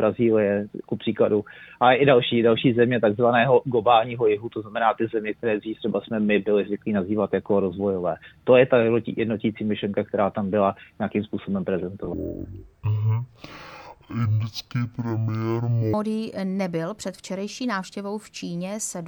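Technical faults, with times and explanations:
12.14–15.94 s, stereo read as mono: interleaved left and right samples are taken one after another as a single channel, so the sound runs at half speed and drops an octave (−12 semitones). On a spectrogram, everything stretches downward, with a fainter mirrored copy in the upper half.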